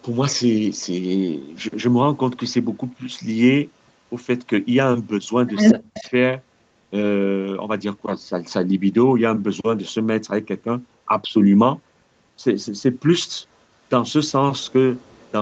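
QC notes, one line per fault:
5.70–6.12 s, speech suppressed in double talk: the speech sinks sharply, by about 40 dB at its deepest, for roughly a third of a second. An echo canceller likely turned down this talker while it could not tell them apart from loudspeaker echo.
5.95–6.09 s, 14.62–14.72 s, 15.02–15.31 s, echo leak: a faint copy of the speech trails it by 225 ms. It is about 25 dB below the speech in the first scrap and about 40 dB below in the last two. This is likely loudspeaker echo that the far end's canceller did not fully remove and sent back.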